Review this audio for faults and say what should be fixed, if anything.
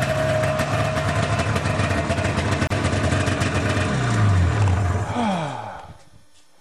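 At 2.67 to 2.70 s there's a gap at a join of encoded pieces: a 32 ms gap with smeared edges, then the sound picks up where it stopped. Each piece's encoder delay and end padding stayed in at the splice. Trim those before joining, or encode gaplessly.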